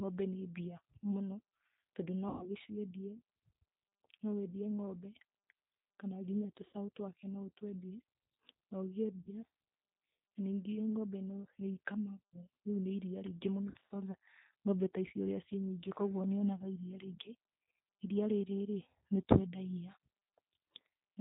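Throughout, the speech carries plainly audible G.729 codec damage. The codec rebuilds each frame from a filter, a pitch predictor and a few pulses. Nothing above 4 kHz survives. The sound is rough and synthetic, which fits an 8 kbit/s stream.

VoIP packet loss concealed by the speech codec strikes at 2.29 to 2.48 s, hiding 120 ms. The decoder stretches its last sound into a fading buzz or noise. Shorter 60 ms gaps follow at 6.67 s after "kana nginya" and at 9.20 s. At 13.70 to 13.92 s, scattered losses total 100 ms.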